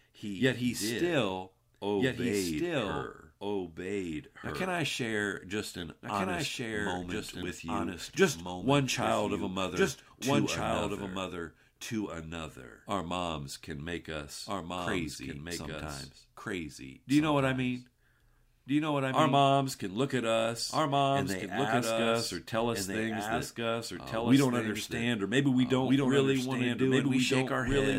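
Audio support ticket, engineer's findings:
Doubled audio track, whole clip: speech likely captured twice, a second copy arriving via a slower path about 1.5 s late. Full-band repeat, only a few dB quieter, dry with no decay or room colour, so every phrase returns as a clear echo.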